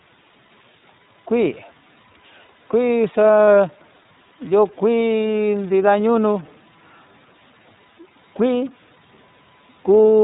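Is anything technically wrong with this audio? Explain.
Yes, three faults can be heard in this speech clip.

Stuck bit, throughout: distortion rides on the speech and noise fills the pauses, likely from one data bit held at a fixed value.

iLBC codec, throughout: narrowband coding removes everything above 4 kHz, and each 30 ms frame's excitation is coded separately, leaving the speech plainly rough and synthetic, consistent with the 13.33 kbps mode.

Lost iLBC frames, 3.46 to 3.48 s: the decoder filled a missing packet, which fits one 30 ms frame, by repeating the last pitch cycle with noise, heard as a brief buzzy or breathy held vowel before clean recovery.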